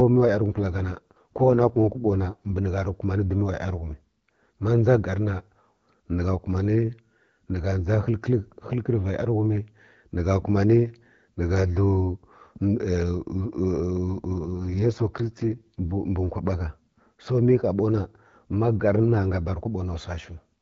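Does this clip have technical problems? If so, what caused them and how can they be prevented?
Yes. From 0.48 to 2.59 s, ending just before "ni gha rə", and again from 14.34 to 15.92 s, the speech turns rough and synthetic with no gap or loss of bandwidth. This is an AMR rate drop: a weak radio link pushed the AMR-WB codec down from 12.65 to 6.6 kbit/s, trading speech detail for error protection. Elsewhere it sounds like clear HD Voice. A stronger, more stable signal prevents this.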